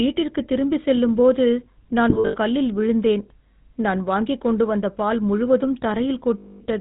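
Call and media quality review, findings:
GSM full-rate codec, throughout: buzzy, gravelly roughness on the speech, band-limited to 4 kHz, plainly audible. Mechanism: vocal-tract model driven by regularly spaced pulses, excitation decimated to every third sample; sound consistent with 13 kbps GSM full rate.

Lost GSM frames, 2.10–2.37 s: metallic ringing smears across about 240 ms. Concealment repeats the last good frame's parameters at decaying level. Losses scattered, about 180 ms total, longest gap under a tenth of a second.

Lost GSM frames, 6.38–6.61 s: held rough, metallic tone over about 220 ms. Same repeat-and-attenuate concealment.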